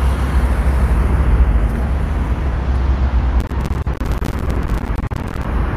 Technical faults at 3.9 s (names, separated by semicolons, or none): processor overload crackle; corrupt frame concealed